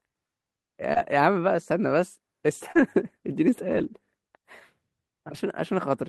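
At 0.93 s there's a short concealed packet loss: about 20 ms of speech never arrived, so the decoder stretched the previous sound over the hole for roughly 24 ms and blended back, leaving a quick smear. The same thing hits again at 2.72 s, with about 40 ms gone and a slightly longer wobble. Each of those spots is also partly a lost packet rebuilt from error correction. From 0.96 to 0.98 s and 2.75 to 2.81 s the decoder plays the low-bitrate backup copy carried in the next packet, so there's no gap, just a rougher, noisier grain. The longest stretch runs from 3.71 to 3.89 s, with around 100 ms of rebuilt audio that sounds coarse and hissy, which points to five separate packets being recovered this way.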